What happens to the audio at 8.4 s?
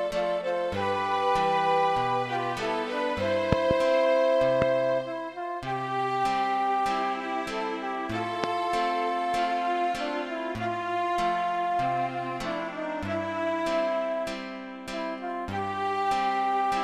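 A sudden voltage spike, likely from a plug, switch or static discharge, hits the signal, causing a single loud pop from 8.44 to 8.46 s, about 20 dB above the surrounding sound.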